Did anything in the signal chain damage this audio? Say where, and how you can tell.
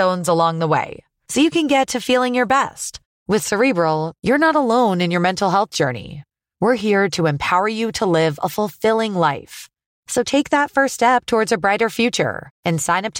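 No, nothing along the way from capture to playback left any audible mark on this recording.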